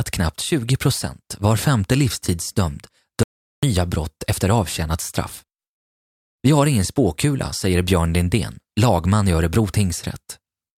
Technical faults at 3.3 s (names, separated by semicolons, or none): audio dropout to silence